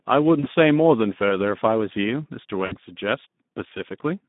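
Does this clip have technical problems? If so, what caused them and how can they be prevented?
Yes. The Speex codec damage runs through the whole clip: hoarse, noisy speech squeezed into a 150 Hz to 3.7 kHz telephone band, which fits a low setting around 11 kbps. Running Speex at a higher quality mode, or moving to a modern codec, would avoid it.

There are also two spots of VoIP packet loss concealed by the speech codec, at 0.39 to 0.47 s and 2.65 to 2.76 s. The decoder fills roughly 40 ms and 60 ms of missing audio by stretching the last sound into a fading buzz or coloured noise. A steadier network path, a jitter buffer, or forward error correction would prevent these dropouts.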